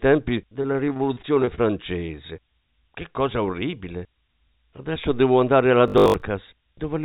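A switching supply whistle runs through the whole clip: a thin, steady tone near 9.5 kHz, drifting slightly between about 9.5 and 9.6 kHz and sitting roughly 30 dB under the speech. A power supply switching in an audible burst mode, or two supplies beating against each other, puts this tone into the signal path. Its pitch wanders a little as the load shifts. It sits well above the speech, which stops near 4 kHz, as expected for a G.711 mu-law call path.

From 0.62 to 1.60 s there is repeated packet loss, and the speech turns robotic. Eleven separate gaps fall inside that second, the longest about 27 ms, and they add up to about 100 ms of missing audio. The receiver patched each hole by stretching the preceding sound, filling about 196 ms in all, roughly a fifth of the span. Because the patches come one after another, the speech sounds choppy, with small pieces gone.

At 2.06 to 2.10 s a short concealed packet loss occurs. 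About 20 ms of audio never arrived in time, and the decoder filled the gap with a continuation of the sound just before it, then blended back into the real signal. The result is a brief smear in the speech rather than a clean dropout. It is short and isolated, unlike the dense cluster earlier.

From 5.88 to 6.22 s, right after "devo andare alla", the speech becomes a rigid buzz. This is robotic sound from repeated short buffers. The buzz sits at 50 Hz, which fits a 20 ms chunk being replayed over and over while fresh audio is skipped. Most of the stretch is repetition. The likely cause is audio reaching the playback software too seldom, forcing it to loop its last buffer.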